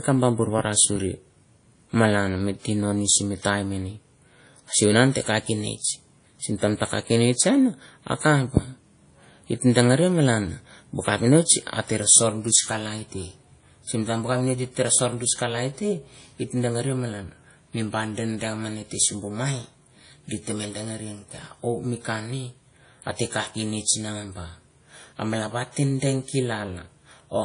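Throughout the speech, a ringing, washy quality and a hiss that swells and fades with the signal point to likely WMA compression at a bitrate near 32 kbps. Long transform blocks smear quantisation noise around each sound. A spectrogram shows nothing above 10.1 kHz and patchy, zeroed weak detail.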